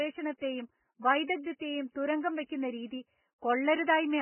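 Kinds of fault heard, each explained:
Vorbis compression: hissy, grainy speech with roughened tone and smeared onsets, nothing above 3 kHz, likely from heavy low-bitrate Vorbis coding near 9 kbps.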